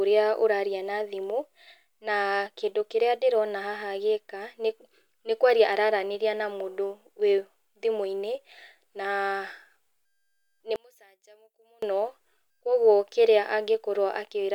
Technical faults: one channel inverted

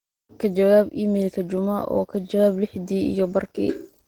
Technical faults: Opus voice compression

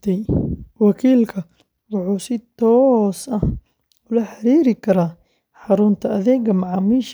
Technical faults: none

